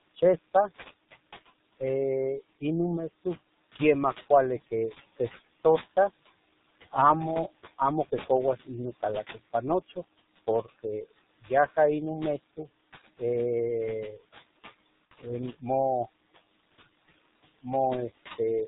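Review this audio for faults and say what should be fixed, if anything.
The noise suppressor is pulling steady background down by about 17 dB, so the noise sinks between phrases and rises under the words. Back off its depth, or fix the room noise (sitting about 15 dB under the speech) at the source instead.

The G.723.1 codec at 6.3 kbit/s is doing heavy damage: nothing above 4 kHz survives, leaving muffled, hoarse speech with smeared consonants. Switch to a wideband codec with a higher bitrate.

There's VoIP packet loss concealed by the speech codec from 15.06 to 15.13 s, a 60 ms gap that fits two lost 30 ms frames. The decoder extrapolates from the last pitch and filter into a fading buzzy tone or coloured noise, and the speech stays weak briefly afterwards. Add jitter buffering or forward error correction to cover lost packets.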